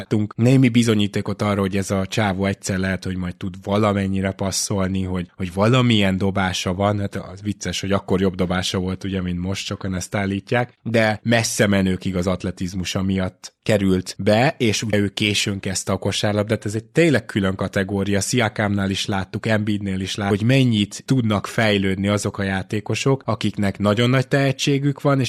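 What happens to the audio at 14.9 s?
At 14.93 s the compressed stream carries damaged data: corrupted bytes make the decoder misread the frame, lose sync and hunt for the next valid header. The result is a very short blip between "miatt került be és" and "ő későn kezdte a".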